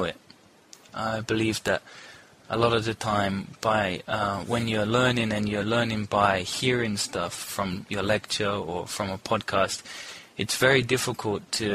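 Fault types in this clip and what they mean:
No audible faults detected.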